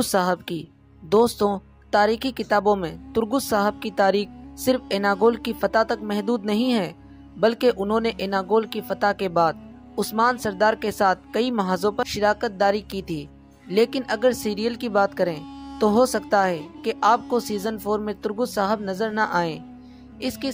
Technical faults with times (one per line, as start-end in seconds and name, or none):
none